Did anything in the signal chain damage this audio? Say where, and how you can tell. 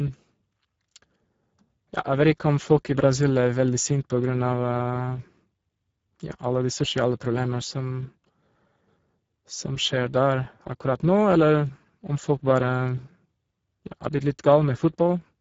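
Yes, the damage happens at the codec stage: Speex coding runs through the whole speech clip. The speech sounds noisy and hoarse from start to finish, with plainly audible coding damage, which fits a low bitrate around 10 kbps. The CELP coder has too few bits to model the excitation, so it substitutes rough, noise-like texture. On a spectrogram, harmonics look smeared and grainy, the band above 4 kHz shows diffuse noise rather than clear structure, and nothing appears above 7.7 kHz.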